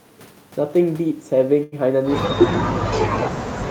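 A short stall from a late packet runs from 1.63 to 1.75 s. A packet arrived late, the jitter buffer ran dry, and about 87 ms of the preceding sound was stretched to fill the gap. The speech resumes where it stopped, so nothing is lost, but one sound hangs too long.

From 2.30 s to the end, the speech dips and breaks up in pieces, falling by about 35 dB at its deepest. This is likely speech suppressed in double talk: an echo canceller, confused by simultaneous talk, attenuated the near-end speaker.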